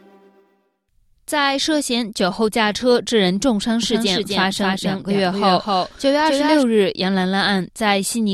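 From 3.83 to 6.63 s a doubled audio track appears: a full-band copy trails roughly 300 ms behind, about 5 dB quieter, without decay, likely from a second, slower capture path. The spectrogram shows every pattern repeated after that fixed gap, switching on and off abruptly.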